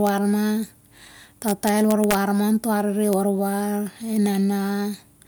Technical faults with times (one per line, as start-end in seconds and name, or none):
0.07 integer overflow
1.48-2.15 integer overflow
3.13 integer overflow